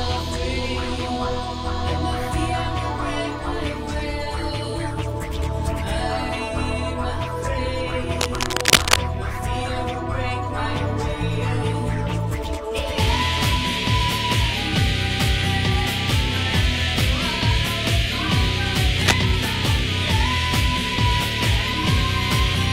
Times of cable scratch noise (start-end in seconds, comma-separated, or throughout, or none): 8.19-9.01, 18.92-19.14